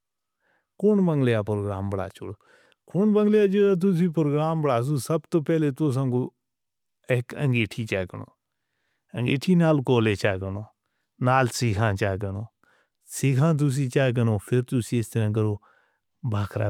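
No audible technical faults.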